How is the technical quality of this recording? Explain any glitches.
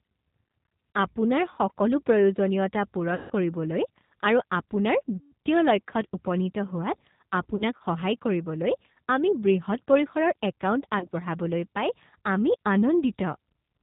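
The recording is narrowband and audibly coded throughout, with four short dropouts that the decoder has papered over.

The G.729 codec shapes the whole clip. At 8 kbit/s it resynthesises speech from a vocal-tract filter, pitch predictor and sparse pulses, so nothing above 4 kHz survives and the sound is rough and slightly synthetic. That steady coloration, rather than momentary damage, sets it apart from the glitches below.

VoIP packet loss concealed by the speech codec occurs at 3.15–3.32 s (between "সকলো প্ৰয়োজনীয়তা" and "কৰিবলৈ আৰু"), 5.17–5.33 s (just before "লক্ষ্যত উপনীত"), 7.56–7.82 s (about 60 ms lost in 30 ms bursts scattered over 240 ms) and 10.99–11.07 s (about 30 ms). The first two each lose about 150 ms. The decoder extrapolates from its last pitch and filter, producing a buzzy or noisy, fading stretch after which the voice stays weak or distorted. A plain dropout would be silent or clicky instead.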